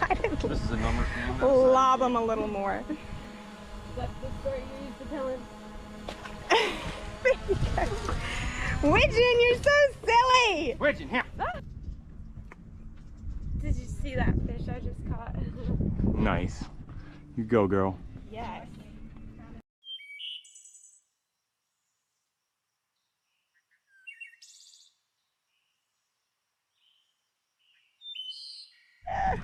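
At 3.25 s there's a tiny skip, roughly a fiftieth of a second gone with the two sides butted together. It's audio missing between chunks, likely from the recorder dropping a sliver each time it rolls over from one block to the next.

Around 10.31 to 10.36 s there's a brief smear: short concealed packet loss. About 20 ms never arrived, and the receiver papered over it with 22 ms of continued sound before blending back into the real audio. It's more of a little wobble than a gap.

At 11.21 s the same chunk-boundary skip returns. Just after it, from 11.52 to 11.55 s, there's another concealed loss. Again about 20 ms went missing, this time with 17 ms of filled-in sound, heard as a quick smudge.

The skips then keep coming at 15.19, 19.17, 23.15 and 27.13 s. That's a steady spacing of about 4 s, which points to 4-second processing chunks. Each one loses roughly 20 ms with no silence marking the join.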